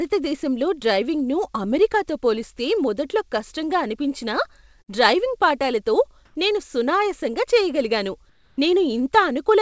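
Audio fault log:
4.82–4.89 s, burst of packet loss: just after "పోలిస్తే మొదట్లో కష్టంగా అనిపించినా", packets went missing. The receiver stretched the last sound for about 55 ms, turning it down as the gap went on, then resumed at "డ్రైవింగ్ పాఠాలతో నేను సునాయాసంగా" with roughly 60 ms of audio gone.
6.25–6.35 s and 8.29–8.57 s, comfort noise in place of the background: in the pauses after "డ్రైవింగ్ పాఠాలతో" (100 ms) and "పాఠాలతో నేను సునాయాసంగా చేయగలిగాను" (280 ms), the real room tone gives way to steady, featureless hiss, about 5 dB louder in the first and about 1 dB quieter in the second. This is likely discontinuous transmission, with the receiver filling the gaps with synthetic noise.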